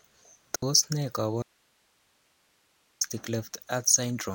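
A digital broadcast dropout at 0.56 s mutes the speech for about 64 ms, which fits two lost frames. The receiver stopped getting usable frames and silenced its output, fading down over about 3 ms, so whatever was sent in that hole is gone.

An audio dropout to a faint residue runs from 1.43 to 3.01 s. The speech cuts abruptly to hiss roughly 40 dB below it and returns just as suddenly. The likely cause is that the signal was lost upstream while the path after the break stayed live.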